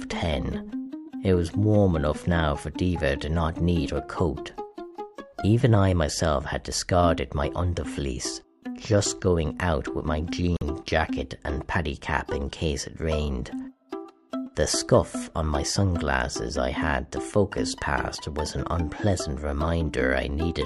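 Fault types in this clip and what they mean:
corrupt frame muted: the decoder rejected damaged compressed frames and silenced them, leaving an abrupt 60 ms gap at 10.57 s, a flat waveform and a blank spectrogram column.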